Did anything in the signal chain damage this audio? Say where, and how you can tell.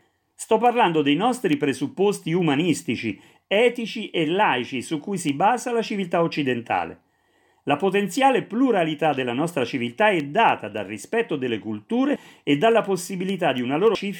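Yes. Converter stage: word clock ticks every third of a second from 0.37 s to the end, sharp and uneven, single samples slipping from an unlocked clock roughly 70 ppm off. Steady spacing separates them from random dropouts.

Codec stage: compressed frames skipped at 12.16 s and 13.95 s, where audio jumps about 85 ms and about 250 ms ahead.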